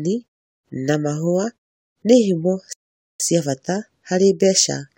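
At 2.73 s the speech stops dead and stays silent until 3.20 s: a rebuffering stall. The player ran out of downloaded audio, waited about 0.47 s for more to arrive, then carried on from the exact point where it stopped, so nothing is skipped but the clip runs longer. On a waveform this is a flat line with abrupt edges; a spectrogram shows a clean vertical gap across all frequencies, unlike the gentle fades of muted pauses.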